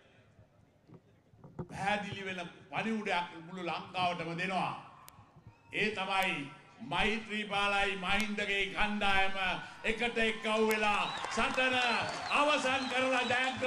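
Bit error spikes land at 5.09, 6.23, 8.20 and 10.71 s: single sharp, broadband ticks peaking around -19, -13, -13 and -7 dBFS. Each is a flipped bit momentarily pushing the sample value by a power of two, lasting a sample or so before snapping back.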